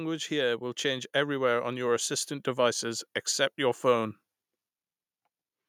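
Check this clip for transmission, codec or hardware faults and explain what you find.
One fault is present: automatic gain rising, from 0.28 s to 4.13 s. Across that span the automatic gain control judged the incoming level too low and pushed its gain upward step by step, ending about 6 dB higher. Because the whole signal is being amplified, not just the talker, the speech and the background noise swell together, producing a slow, steady climb in loudness over nearly four seconds rather than a sudden jump.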